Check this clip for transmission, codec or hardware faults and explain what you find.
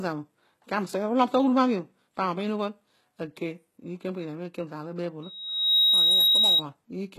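Two problems stand out: a codec issue across the whole clip and a feedback squeal near the end.

Throughout, the speech has plainly audible codec damage, with gritty, metallic sibilants and nothing above 12.4 kHz. That's likely HE-AAC compression, rebuilding the treble by copying lower bands upward. The harshness points to a low bitrate, around 16 kbps.

From 5.23 to 6.63 s there's a loudspeaker feedback squeal: a single 3.8 kHz tone that swells over about half a second until it sits around 10 dB above the speech. The mic is picking up its own speaker, and the loop runs away at that frequency.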